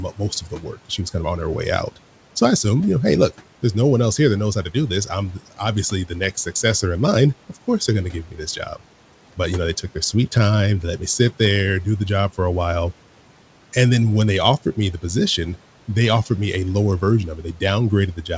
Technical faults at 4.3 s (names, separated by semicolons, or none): none